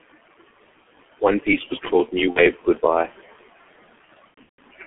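A short speech recording carries heavy G.723.1 codec damage throughout. The audio is confined to a telephone band of roughly 200 Hz to 3.4 kHz, and the coder's slow-updating voice model, working in 30 ms frames, leaves the speech muffled and hoarse with smeared consonants, which fits its 6.3 kbit/s mode. Room noise sits about 21 dB below the speech. VoIP packet loss concealed by the speech codec occurs twice. From 2.30 to 2.40 s, about 60 ms of signal is missing, consistent with two 30 ms frames. The decoder bridges the gap by extending its last pitch and filter state at falling gain. From 4.28 to 4.63 s, losses totalling about 240 ms are scattered across 360 ms, which points to around eight frames. The longest unbroken gap is 150 ms, long enough that the decoder mutes the concealment from the third lost frame in a row. Because each decoded frame depends on the previous one, the speech stays weak or distorted for a stretch after each gap.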